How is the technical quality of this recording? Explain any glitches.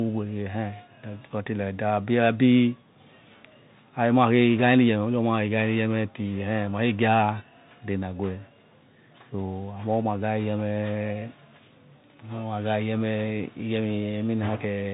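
The speech has passed through a Bluetooth CVSD headset codec, and the damage is plainly audible throughout. CVSD sends one bit per sample, simply up or down, with an adapting step size, at a rate that fits 64 kbps. Nothing above 4 kHz survives, so the speech sounds narrow and muffled. Loud, high-pitched moments outrun the step size and distort, s sounds come out scratchy, and a granular hiss sits underneath the whole recording.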